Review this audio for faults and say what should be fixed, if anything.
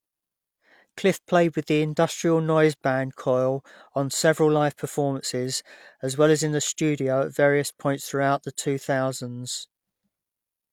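Nothing needs fixing: the speech signal stays technically sound throughout, with no audible problems anywhere in the recording.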